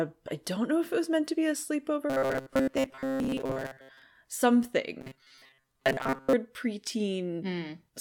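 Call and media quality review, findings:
Robotic sound from repeated short buffers, 2.10–4.02 s, right after "meant to be a". Likely receive-side buffer underrun: audio arrives too late, the last ~7.5 ms segment replays in place of it. Rigid, metallic 133 Hz buzz overlays speech.

Same robotic sound, 5.01–6.35 s. Likely the same underrun: repeats cover most of the span, imposing a 133 Hz buzz. Speech contour is still faintly followed.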